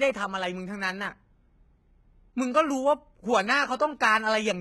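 Throughout the speech, heavy damage that is likely HE-AAC compression at a very low bitrate, which fits about 16 kbps: the treble is rebuilt from copied lower bands, so s sounds turn gritty and lispy. A spectrogram shows smeared, repeated-looking upper bands with nothing above 11.8 kHz.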